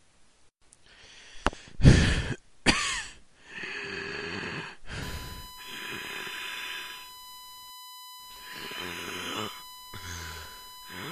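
A recording of everyday sound with three abrupt skips, at 1.54 s, 8.36 s and 10.45 s, each a jump where the sound skips ahead by roughly a tenth of a second, about 40 ms, and a tenth of a second again. These are likely dropped buffers from an overrun. The waveform shows a hard splice with no gap, and the spectrogram a thin vertical broadband line. From 5.02 s to the end a steady 1 kHz USB whine sits about 15 dB below the sound, matching a 1 ms bus frame rate leaking through power or ground, and it appears on the spectrogram as a flat horizontal line at 1 kHz.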